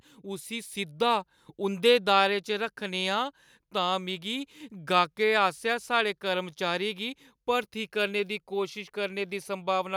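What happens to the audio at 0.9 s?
At 0.9 s the level is climbing because of automatic gain rising. It runs from 0.22 to 1.88 s. The gain control judged the incoming speech too quiet. So it turned its gain up slowly rather than in one step. Over about 1.7 s the level rises by about 5 dB. The voice and the background noise swell together. Nothing in the sound itself gets louder. The recording chain is simply amplifying everything more.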